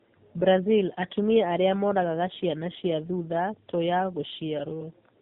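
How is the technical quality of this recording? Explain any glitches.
The quality is poor. Tandem speech coding affects the whole clip. The speech passed through two narrowband speech codecs in a row, which fits AMR-NB at both ends. Each coder reworked the previous one's damage. The speech sounds rough, warbly and muffled, with nothing above 3.8 kHz.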